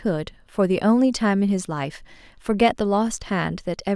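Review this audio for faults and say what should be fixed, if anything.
Nothing in the recording calls for correction, as the signal holds steady from the first moment to the last with no technical faults to report.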